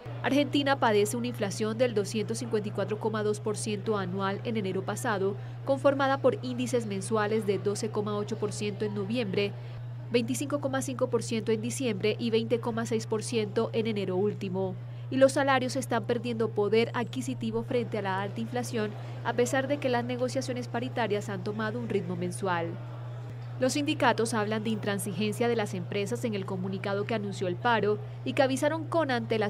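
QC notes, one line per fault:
No technical faults are audible anywhere in the signal, which stays steady and intact across the whole clip.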